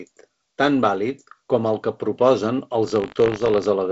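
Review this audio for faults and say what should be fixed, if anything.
A rattling, robotic buzz at 50 Hz runs through the speech from 2.86 to 3.67 s. This is buffer tearing: writer and hardware reader have slipped, so each 20 ms period carries a small sliver of audio about 70 ms old, with hard joins. Keeping the write pointer a safe margin ahead of the read pointer, with underrun detection and resynchronisation, prevents it.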